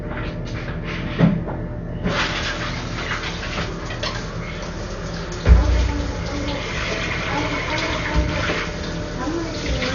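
A recording of sounds that is dull throughout, with nothing above 7 kHz and heavy codec damage: rough, fluttering noise clinging to tonal parts. This is likely Dolby Digital compression at a very low bitrate, around 48 kbps. A spectrogram would show a flat ceiling at 7 kHz and grainy, speckled noise filling in where detail was dropped.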